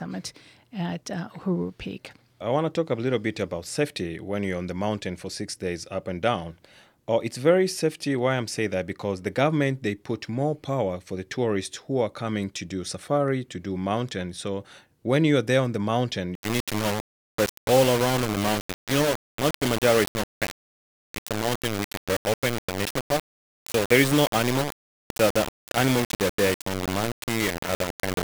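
From 16.35 s to the end of the clip, the speech has most likely been reduced to a very low bit depth without dither: rounding to so few levels fits about a 4-bit word. With no dither, the rounding error follows the waveform, so it turns into distortion tied to the speech rather than a steady hiss. The speech sounds harsh and grainy, with gritty noise nearly as loud as the speech itself, and quieter stretches break up or sputter.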